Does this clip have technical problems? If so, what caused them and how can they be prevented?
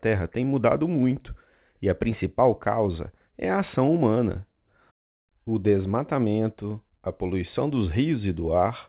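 No, this speech clip has no technical problems.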